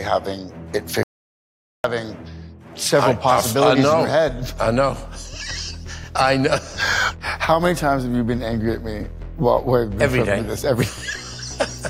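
The audio has a playback stall at 1.03 s: the sound cuts out abruptly in mid-flow and the output stays silent until 1.84 s, a gap of about 811 ms, before sound returns. A dropout of that length, clean silence rather than noise or a glitch, most likely comes from the player running short of buffered data or its audio thread being blocked, so nothing was delivered to the output until it recovered.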